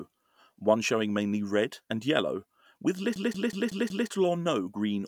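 It's a speech clip with a system hang loop running from 3.16 to 4.09 s, right after "red and yellow with". For that stretch the playback side froze while the sound hardware kept replaying the same ring buffer, so one chunk of about 186 ms repeats exactly five times at roughly 5.4 Hz. That gives a machine-gun stutter rather than a buzz, and the loop length fits an 8192-sample buffer. Normal speech picks up again at "or no" with essentially nothing missing.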